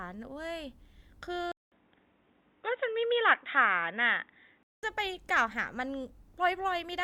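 At 1.52 s the speech drops out for about 200 ms, then returns dull and boxy, with nothing above 3.8 kHz and a level shift of a few decibels. A new, faint noise floor comes in with it. The likely cause is the input switched to a poorer device, such as another microphone or a headset's call profile, whose narrower band and own tone take over. At 4.83 s the original, fuller sound returns.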